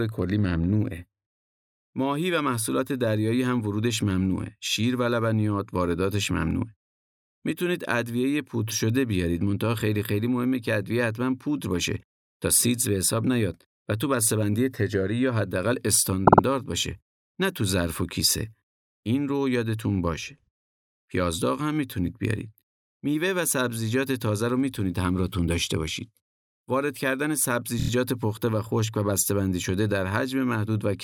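At 16.26 s the speech stutters: a 52 ms scrap plays three extra times through 16.42 s, which fits a block of two compressed frames. At 27.78 s a shorter 26 ms scrap, about one frame's worth, repeats four extra times until 27.89 s. Both are repeated frames, where the same coded frames were written or sent again and the decoder played them each time. Each stutter lengthens the clip, by 0.16 s and 0.10 s.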